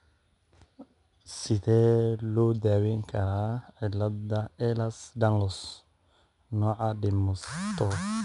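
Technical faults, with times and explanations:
Throughout: 4-bit ADPCM compression. Coarse 4-bit steps leave gritty hiss tracking loud speech; spectrogram shows broadband haze, empty above 10.6 kHz, fitting an 89 kbps stream.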